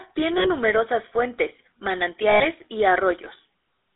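Throughout, the speech carries GSM full-rate codec damage: a buzzy, gravelly roughness from pulse-driven vocal-tract modelling, confined to 300 Hz–3.7 kHz, consistent with 13 kbps coding. Lost GSM frames at 0.38–0.48 s and 2.30–2.45 s (60 and 100 ms) are bridged by repeating the last good frame, heard as a brief metallic ring.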